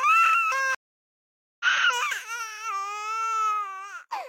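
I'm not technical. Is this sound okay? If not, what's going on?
No, there's a stream reconnect. At 0.75 s the sound drops out for about 0.85 s, until 1.65 s. The connection broke and the player reconnected, so it picks up roughly three-quarters of a second further along, skipping a bit.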